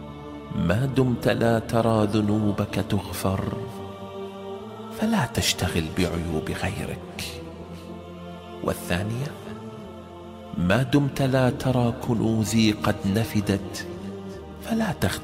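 No technical faults can be heard anywhere in the audio. There is nothing to report.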